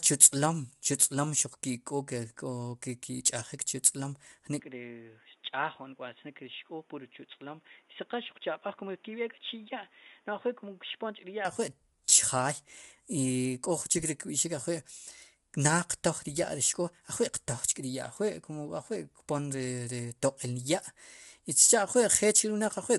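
Speech recording with grainy, rough-textured voice and nothing above 11.6 kHz throughout, likely low-delay AAC compression, consistent with AAC-ELD at about 32 kbps. From 4.60 to 11.45 s, between "chu tz'lom" and "ajwi' chjaay", the sound abruptly turns boxy, limited to 3.8 kHz, roughly 10 dB quieter, with added background noise around 30 dB down and no gap at the switch, likely an input switched to a poorer device.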